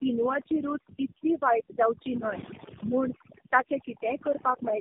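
From the first moment to the end, overdone noise removal has pushed the background to near silence dotted with twinkling specks. Unlike a simple noise gate, which shuts and opens as a whole, this fault drops individual frequency bands, so the weak parts of the voice vanish piecemeal.

Throughout, the speech also carries tandem speech coding. Nothing sounds above 3.7 kHz, and the voice is rough, muffled and warbly, which fits several narrowband coders in a row ending in AMR-NB, each re-encoding the last one's damage. A single low-bitrate codec would blur less.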